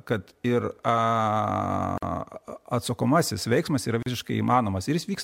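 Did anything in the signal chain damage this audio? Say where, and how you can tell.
Yes, at the codec stage: a gap at a join of encoded pieces. The speech stops dead for 48 ms at 1.98 to 2.03 s and for about 38 ms at 4.03 to 4.06 s, two seconds apart, which fits the audio being encoded in 2-second pieces and joined untrimmed. Encoder start-up delay and final-frame padding leave inserted silence. Unlike a network dropout, nothing is lost: the speech resumes exactly where it stopped, with smeared edges.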